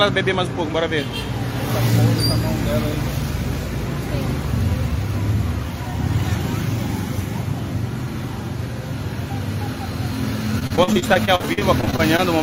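Right near the end, from 10.59 to 12.20 s, there's a burst of repeated packet loss that gives the sound that robotic, choppy edge. The stream keeps dropping out in short holes, which sounds like seventeen or so, none longer than about 42 ms. Each one gets papered over by stretching the last bit of sound, so roughly a quarter of that stretch is filler. You hear it as choppy stutter with slivers missing.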